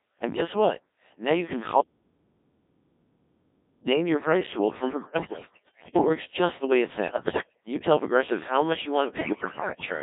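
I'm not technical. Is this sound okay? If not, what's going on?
No. The whole recording has passed through the Codec 2 vocoder, a very low-rate digital radio voice system. It doesn't keep the real sound. It rebuilds the speech from a few basic measurements, so everything sounds robotic, buzzy and thin.

There are also bit errors on digital voice radio, in three bursts: from 5.04 to 6.09 s, from 7.08 to 7.60 s, and from 9.16 to 9.86 s. A large share of the received data was corrupted. The voice jumps in pitch and loudness and breaks into warbles and bleeps.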